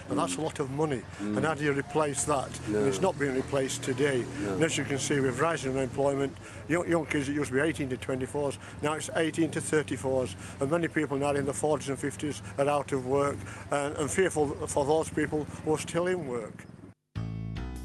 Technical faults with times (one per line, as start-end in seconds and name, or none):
none